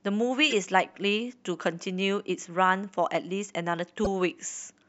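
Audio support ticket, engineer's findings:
Corrupt frame decoded, three spots in the speech. Short chirpy bursts at 0.50–0.53 s and 4.04–4.07 s, both fairly loud, roughly a few frames and a couple of frames hit. Faint blip at 1.53 s, about one frame. Probable component: decoder or transport upstream of it. Mechanism: flipped bits in compressed frames, decoded anyway, so misread gains and codes spray energy into the wrong bands for each damaged frame's length.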